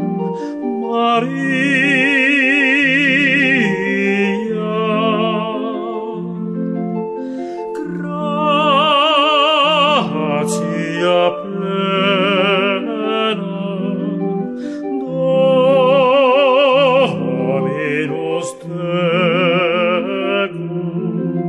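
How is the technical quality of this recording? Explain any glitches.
The technical quality of this recording holds up, with no glitches to explain.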